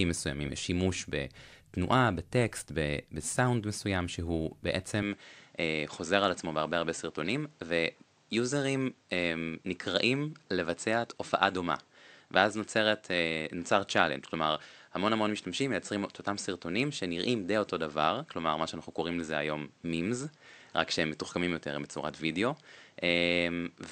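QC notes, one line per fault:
5.03 s to the end: input switched to a poorer device. The speech suddenly loses its top end, with nothing above 8.4 kHz, so it turns duller and boxy from that point on. A new noise floor appears, roughly 35 dB under the speech, but loudness stays about the same and there is no gap at the change. The sudden band-limiting with a fresh background noise is most likely a change of capture device partway through the recording.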